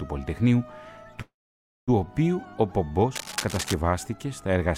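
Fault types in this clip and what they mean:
Call audio freeze: from 1.21 to 1.90 s the sound stalls, a brief fading tail then about 0.56 s of silence, likely from delayed packets emptying the jitter buffer; playback resumes intact, 0.66 s late.
Cable scratch noise: from 3.13 to 3.74 s dense, uneven scratchy bursts sit roughly 10 dB under the sound, likely a worn cable or connector shifting its contact resistance.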